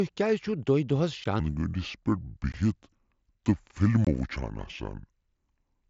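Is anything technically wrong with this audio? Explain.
Yes, there are two faults.

Unconcealed Bluetooth headset packet loss occurs at 1.24 s, at 2.52 s, and from 4.05 to 4.07 s. The first two gaps last about 15 ms each, which fits two lost headset frames. The third lasts about 22.5 ms, which fits three. Nothing filled in the missing audio, so each gap is a short hole with hard edges. The wideband mSBC headset link carrying the audio adds only a light grain on louder sounds.

A section at the wrong speed runs from 1.40 s to the end of the clip. Playback there is at about 0.68 times normal speed, so the speech is slowed and sits roughly seven semitones lower. Speed and pitch drop together at that moment and stay down for the rest of the clip, giving a deep, dragging quality. The likely cause is that portion being played or resampled against the wrong clock rate.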